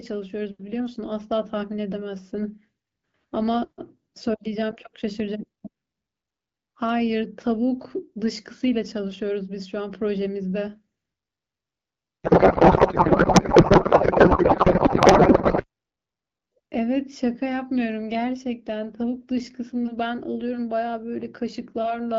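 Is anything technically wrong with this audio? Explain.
Yes. From 12.24 to 15.65 s there is a codec payload misread: the receiver unpacks the AMR-WB frames with the wrong bit layout, which fits octet-aligned packets being read as bandwidth-efficient, so each field lands in the wrong place. The speech gives way to garbled noise and warble that barely tracks it, until the clear wideband sound, consistent with AMR-WB at 12.65 kbit/s, returns.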